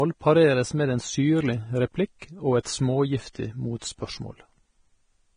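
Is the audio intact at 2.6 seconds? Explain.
No. From 2.63 to 2.65 s there is pre-echo: a short hiss rises about 22 ms ahead of a sharp onset, because the codec spread its quantisation noise across the whole transform block. On a spectrogram it shows as a vertical wash of broadband noise just before the attack, and on the waveform as low-level fuzz before the transient. The speech is also grainy and hissy throughout, likely from heavy Vorbis compression at a low bitrate consistent with roughly 23 kbps. A spectrogram would show nothing above 9.7 kHz and speckled, noisy treble where finer harmonic detail should be.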